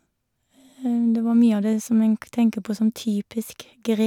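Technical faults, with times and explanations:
No technical faults detected.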